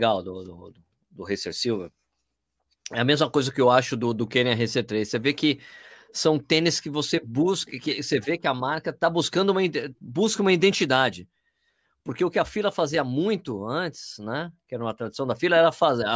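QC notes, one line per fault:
No faults found.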